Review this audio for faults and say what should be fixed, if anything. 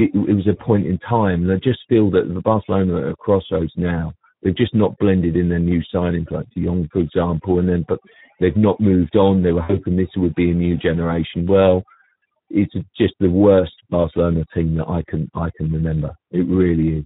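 Overdone noise removal, throughout: the denoiser cuts frequency bands near its noise estimate, leaving near-silent gaps with twinkling specks as quiet detail disappears.

Speex codec, throughout: clearly audible low-bitrate coding makes the speech hoarse and noisy, which fits a setting around 11 kbps.

VoIP packet loss concealed by the speech codec, 9.63 to 9.78 s: roughly 60 ms of audio went missing, and the decoder stretched the last sound into a fading buzzy colouring that lingers briefly after recovery.

To prevent these, ease the noise reduction strength, raise the Speex quality or use a stronger codec, and add jitter buffering or forward error correction on the network path.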